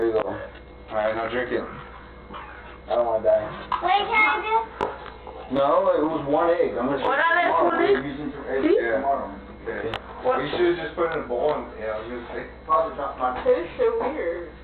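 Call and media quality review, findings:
Channel delay (comb filtering), whole clip: one channel lags the other by roughly 20 ms, likely a misaligned buffer before the mono downmix. Shared content cancels at evenly spaced frequencies from around 30 Hz upward. Sound is rough, slightly doubled.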